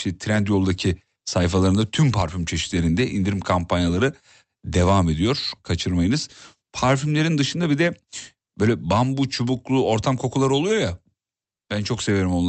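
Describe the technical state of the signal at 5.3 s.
At 5.3 s the speech is intact, with nothing beyond the ordinary coding character and limited top end of the call path it passed through.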